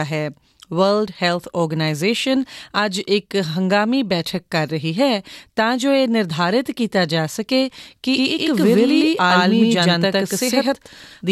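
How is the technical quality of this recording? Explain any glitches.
The recording has one clear glitch, a doubled audio track, in the final stretch.

From 8.17 s to the end, the sound is heard twice: a second full-band copy trails the original by about a tenth of a second at roughly the same loudness. The likely cause is the audio being captured again through a slower path, or two copies held out of step. Unlike an echo or reverb, the copy has no decay and no room colour, repeats only once, and cuts in abruptly rather than building up.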